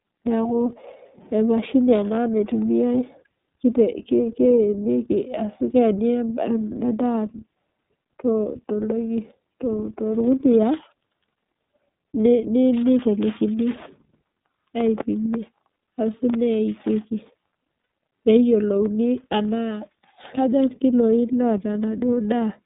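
Throughout, the speech is squeezed into a narrow telephone band, about 150 Hz to 3.7 kHz. It sounds clearly rough and synthetic, typical of the iLBC codec at a rate that fits 30 ms frames.

From 17.81 to 17.90 s, lost iLBC frames leave a 90 ms gap. The decoder fills it with a held, buzzy repeat of the last pitch cycle, then recovers at once.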